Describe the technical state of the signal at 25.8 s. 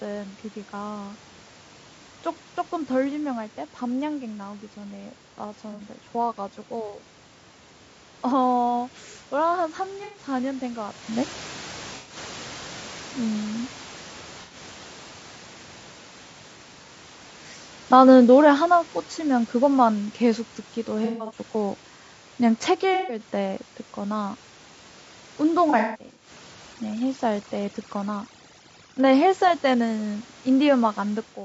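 At 25.8 s the signal sits inside a stretch of AAC frame loss with concealment running from 25.70 to 26.30 s. About 300 ms of audio went missing, scattered across roughly half a second, with the longest single gap around 150 ms. For each missing frame the decoder rebuilt sound from the last good spectrum, reusing its energy with scrambled phase. The result is a smeared, noisy, phasey patch. On a spectrogram, the harmonic lines blur into flat, noise-like smudges that repeat the previous frame's shape.

Underneath, the whole clip carries the rough, grainy texture of low-delay AAC compression, likely AAC-ELD at a low rate around 32 kbps. The short frames resolve pitch harmonics poorly, so noise fills the spaces between them, and the top band sounds synthetic. A spectrogram shows fuzzy harmonics with speckled energy between them and a blocky, smoothed upper band.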